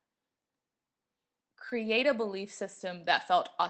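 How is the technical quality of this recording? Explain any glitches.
There's one glitch in this speech, which comes through a call link whose top end stops around 8 kHz. At 1.69 to 1.73 s, just before "a belief", there's a short concealed packet loss. About 20 ms never arrived, so the receiver extended the preceding sound to bridge it, leaving a brief smear.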